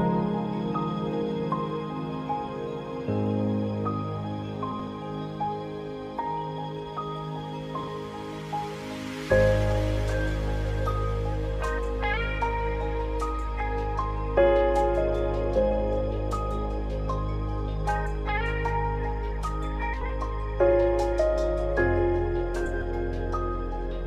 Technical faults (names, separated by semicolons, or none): frames out of order